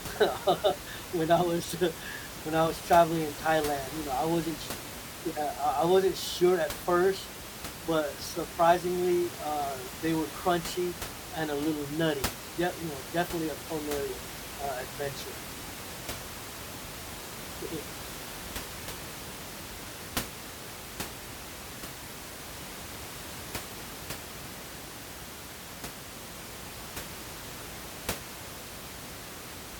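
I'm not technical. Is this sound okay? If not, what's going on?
Yes, nothing here points to a fault in the recording.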